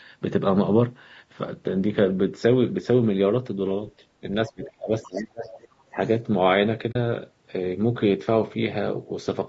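Throughout the speech there is a rough, grainy texture, with noise filling the gaps between harmonics and a top band that sounds synthetic. It is likely low-delay AAC compression (AAC-ELD) at about 32 kbps, whose short frames resolve pitch poorly, and the damage is plainly audible. The band stops near 8 kHz, as the call's microphone processing shapes it.

From 4.21 to 5.52 s the talker's speech sinks in pieces, totalling roughly a second, at worst by about 30 dB; a shorter dip of about 15 dB follows from 5.91 to 6.00 s. This is speech suppressed in double talk, likely because the echo canceller could not tell its own talker from the far end's echo and turned both down.

During and just after that stretch, faint scraps of a second voice surface, at 4.63 to 4.67 s about 20 dB below the speech and at 5.45 to 5.68 s about 25 dB below. This is the other side's voice leaking through, likely loudspeaker echo the canceller did not fully remove from the microphone.

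At 6.91 to 6.96 s a soft-edged hole of about 40 ms opens, fading out and back in. This is AAC frame loss with muting: the decoder zeroed the missing spectrum, and the gap fits two lost frames smoothed by the overlapping windows.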